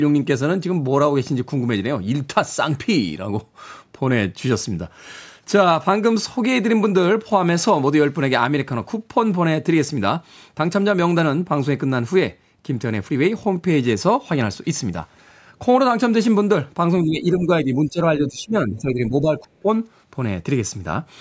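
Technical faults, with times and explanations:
17.04–17.99 s and 18.18–19.69 s, speech suppressed in double talk: in two nearby stretches the speech sinks, by around 10 dB in the first and around 15 dB in the second, with the loss patchy rather than steady, affecting roughly 0.7 s and 1 s. The likely cause is an echo canceller that, with both sides talking, treated this talker as loudspeaker echo and attenuated it. On a waveform the envelope shrinks in uneven chunks. A spectrogram shows those segments fading, all beneath the call's 8 kHz ceiling.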